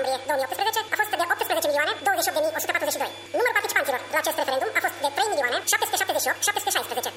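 Audio read two samples at a time (double speed), throughout the clip: everything plays twice as fast and a full octave (12 semitones) high, because the reader takes each pair of samples as one frame.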